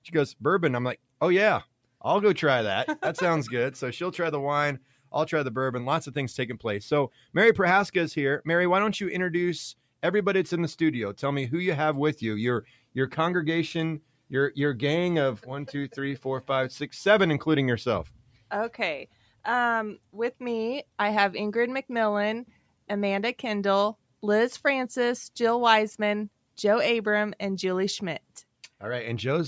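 The call's noise suppressor mistook parts of the sound for noise and pulled them down by as much as about 12 dB. This happens at 4.8–5.13 s, 7.1–7.35 s, 12.64–12.95 s, 14.0–14.31 s, 18.09–18.51 s, 19.06–19.42 s and 22.46–22.89 s. Each time, a few tenths of a second of sound cut by the noise suppressor sags in level, so sustained or fading sound dips or has its tail clipped short. Content above 8 kHz is missing throughout, as expected from the call microphone processing.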